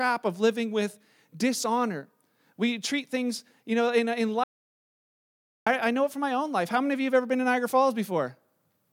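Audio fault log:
4.44–5.66 s, audio dropout to silence: the speech cuts out for about 1.23 s into silence, no room tone, likely a lost input link.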